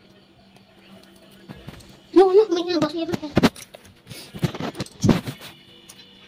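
Hard clipping appears three times. From 2.17 to 2.39 s the peaks are driven about 3 dB past the limit of a converter or number format, so their tops are sheared flat and the sound gains crackle on its peaks. From 3.38 to 3.46 s the overload reaches about 12 dB and the flattening becomes a harsh fuzz. At 5.1 s a brief overload of about 9 dB gives crackle on its peaks. On a waveform each spot shows squared-off, plateaued peaks. On a spectrogram each shows a vertical smear of harmonics reaching high up the spectrum.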